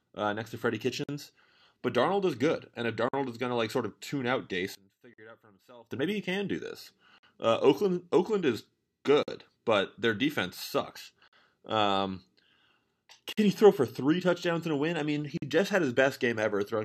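The speech drops into brief silences at 1.04, 3.09, 5.14, 7.18, 9.23, 11.28, 13.33 and 15.38 s. Each lasts about 48 to 50 ms, and the edges are softened. The sound resumes exactly where it stopped, every 2.0 s. This is a gap at a join of encoded pieces: the audio was encoded in two-second sections and spliced without trimming, leaving each section's start-up delay and final-frame padding in place as silence.

From 4.75 to 5.91 s, overlapping the gap at 5.14 s, the speech collapses in level by about 24 dB and turns faint, with its centre almost gone. What remains is only the small difference between the two sides. The likely cause is one channel inverted: with one stereo side in reversed polarity, the shared centred content cancels when the channels combine to mono.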